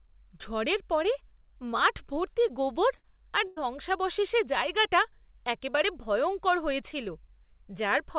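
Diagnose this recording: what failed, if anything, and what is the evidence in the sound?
Network stage, short concealed packet loss. From 2.48 to 2.51 s, just before "গোবর আর", the speech briefly smears. About 20 ms of audio never arrived in time. The receiver filled roughly 12 ms of it by extending the preceding sound, then blended back into the real signal. The call path is narrowband, with nothing above 4 kHz, which fits G.711 mu-law.

Network stage, burst of packet loss. This happens twice. The first is at 2.97 to 3.05 s, right after "মাঠভর্তি গোবর". About 60 ms is lost, and 60 ms of continued, fading sound covers it. The second is at 3.47 to 3.72 s, after "মাঠভর্তি গোবর আর". About 100 ms is lost, and roughly 91 ms is concealed. Another 11 ms is added. In both cases the speech resumes further on, with the gap's content gone.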